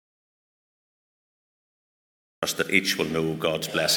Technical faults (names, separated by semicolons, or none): audio dropout to silence